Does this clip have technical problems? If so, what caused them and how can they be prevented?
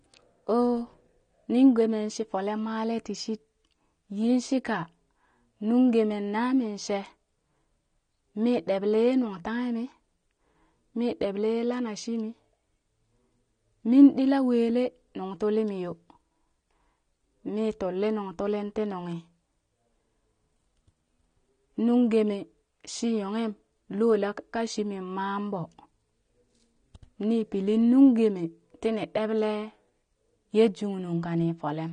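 Yes. The speech runs dull and smeared the whole way through, with nothing at all above about 9.7 kHz and a watery, fizzy edge on sibilants and held vowels that's plainly audible. That's the signature of AAC compression, likely AAC-LC pushed to a bitrate that fits something around 32 kbps. The encoder lowers its cut-off and thins out or fakes the upper bands to save bits. To prevent it, encode at a higher bitrate or keep a lossless master and compress only once at the end.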